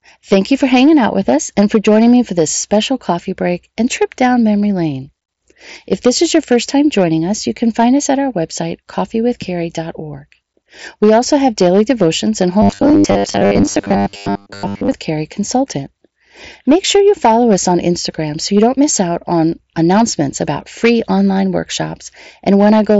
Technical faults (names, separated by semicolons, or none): hard clipping; robotic sound from repeated short buffers